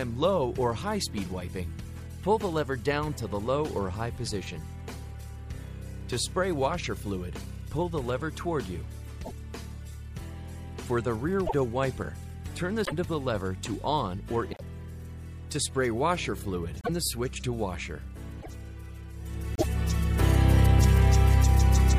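At 9.24, 11.46, 12.84, 14.51, 16.81, 18.41 and 19.55 s, the sound jumps forward and garbles for about 80 to 100 ms, roughly three 26.1 ms frames. This is likely a broken MP3 bit reservoir: the frames after a cut draw on bytes belonging to other frames. On a spectrogram each event shows as a short broadband smear or gap, and the waveform shows a brief discontinuity.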